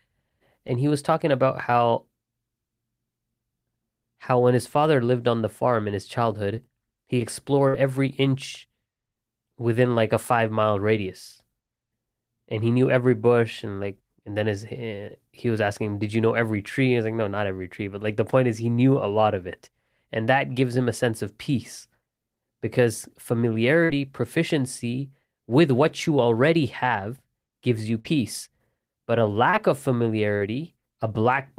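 At 0.67 s and again from 6.56 to 6.58 s there is short concealed packet loss. About 10 ms of the speech stream failed to arrive in time, and the decoder bridged each gap by extending the preceding sound for roughly 7 and 11 ms before blending back into the received audio. Both events come across as a momentary smear or wobble rather than a clear break.

A burst of packet loss occurs at 7.68 to 7.74 s, just before "every inch". About 50 ms of consecutive audio went missing. The receiver extended the last sound for around 50 ms, fading it as the gap continued, so a brief held buzz or decaying hiss stands in for the lost material. Playback then picks up later in the utterance with the intervening portion gone.

The same burst of packet loss recurs at 23.84 to 23.90 s, just before "proficiency with what you", and at 27.99 to 28.05 s, right after "already have gives you". Each time roughly 50 ms is dropped and covered by a fading continuation of about the same length.

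Short concealed packet loss appears twice more, at 29.50 to 29.54 s and at 30.37 to 30.47 s. About 30 ms is lost in each case, longer than the earlier short gaps, and the synthesized fill runs about 23 and 39 ms. Each comes across as a brief smear or wobble where the extrapolated sound sits, and in the last one there is a small skip forward in the timing of the audio.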